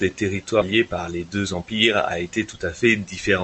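Skip ahead at 0.61 s: the speech jumps forward with no gap at all, and nearly half a second of the talker's audio never plays. Later audio was already queued, so when that stretch was lost in transit or discarded by an overfilled jitter buffer, playback simply resumed from the newer material. The two sides are butted together almost directly, so the sound lurches abruptly and the stretch between them is gone rather than silenced.

Jitter buffer speed-up from 0.71 to 1.69 s: just after the jump, the speech runs at about 112% of normal speed while keeping its pitch, and it sounds hurried. The receiver's buffer was holding more audio than its target, so it repeatedly cut out short pieces, each one or a few pitch periods long, trimming around 150 ms in total to bring the delay back down. The call codec's band limit at 8 kHz, consistent with Opus at a moderate bitrate, applies throughout.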